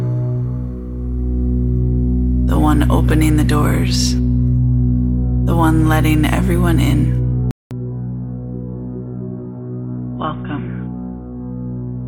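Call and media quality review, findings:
Input switched to a poorer device at 7.51 s, likely another mic or a headset call profile. 0.2 s dropout, then nothing above 3.6 kHz: dull, boxy to end, level down about 10 dB, faint new noise floor.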